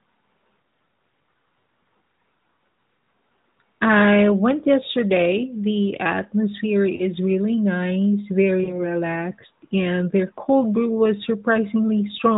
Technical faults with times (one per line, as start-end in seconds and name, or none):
6.96-7.05 lost AMR speech frames
8.64-8.82 lost AMR speech frames